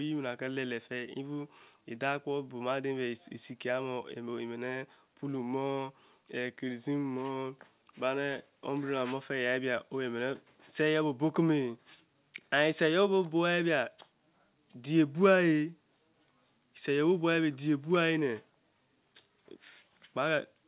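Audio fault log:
No faults are present in the speech signal, which shows the narrowband character of its WebRTC call path, G.711 A-law at 64 kbps, with nothing above 4 kHz.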